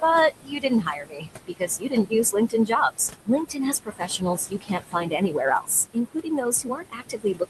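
Noise suppressor artifacts run through the whole clip. The suppressor pulls the steady background, sitting about 9 dB under the speech, down by about 20 dB in each frame. The residue pumps, sinking in gaps and rising under speech.

Speech cut by the noise suppressor happens five times as the suppressor mistakes speech for noise and turns it down with the background:
0.4–1.28 s, about 21 dB deep, affecting most of that span;
1.47–2.13 s, about 20 dB, for roughly half of it;
2.32–2.71 s, a brief dip of about 13 dB;
3.5–5.4 s, about 20 dB, over about half;
5.93 s to the end, about 21 dB.
Consonants and endings sound swallowed and faint.

The call codec's coding noise sits underneath, with the top end rolling off near 12 kHz.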